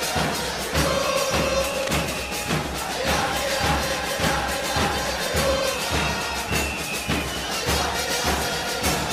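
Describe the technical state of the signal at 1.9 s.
A short burst of scratching, rustling noise sits over the sound from 1.75 to 1.91 s, so at 1.9 s the signal is in the last moments of this cable scratch noise, roughly 10 dB below the signal. The likely cause is a worn cable, connector or control carrying a DC voltage being moved. Its contact resistance jumps around rapidly, and those fluctuations add dense, irregular bursts of noise on top of the audio.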